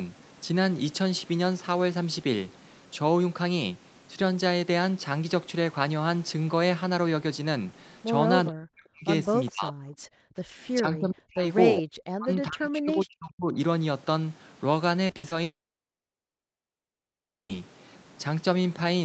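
A speech recording carried over a call, with high end stopping at 8 kHz (consistent with Opus at about 32 kbps), shows several faults. The talker's level repeatedly plunges by about 40 dB at 8.48–9.07 s, 9.5–9.79 s, 10.8–11.5 s, 11.8–11.87 s and 12.09–13.56 s. This is speech suppressed in double talk, likely because the echo canceller, unable to tell the talker from loudspeaker echo while both sides spoke, turned everything down. Between 9.46 and 9.5 s a faint delayed copy of the voice slips through, about 25 dB below the speech and trailing it by 412 ms. This echo leak is likely residue the far end's canceller failed to remove before sending it back. From 10.07 to 10.52 s the room background sinks by about 40 dB for roughly 0.4 s, then returns: background gated by the echo canceller, which clamped the microphone while the loudspeaker played. Between 15.07 and 15.33 s the sound turns choppy, with holes up to 60 ms and about half that span patched. 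This is repeated packet loss (robotic sound), each gap filled by stretching the previous sound. Then from 15.43 to 17.54 s the audio briefly smears and falls to near silence for about 2 seconds. This is a long network dropout, likely from no packets arriving, before speech resumes.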